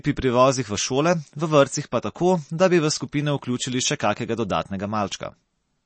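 Throughout, MP3 compression is plainly audible, likely from a low bitrate near 32 kbps: treble stops at 8.4 kHz, shown as a flat spectrogram ceiling, with watery, swirly smearing.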